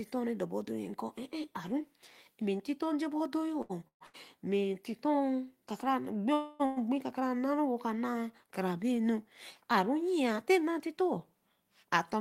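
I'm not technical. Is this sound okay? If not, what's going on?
No, the sound has three kinds of network problem.

From 3.57 to 4.16 s there are repeated stalls (stutter): the audio stops four times, the longest pause about 130 ms, and each pause is filled by stretching the last sound. Nearly half of that stretch is filler, so it drags, but nothing is lost.

At 6.34 to 6.62 s and again at 6.66 to 6.78 s there is a call audio freeze, likely caused by data being held up on its way. The last sound is drawn out for about 260 ms and then about 110 ms, never going fully silent, and the audio then resumes where it stopped.

From 11.49 to 12.16 s there is a jitter buffer speed-up. Too much audio had piled up, so tiny slices were cut out, about a twentieth of a second in total. The audio runs about 6% faster at the same pitch and sounds slightly hurried.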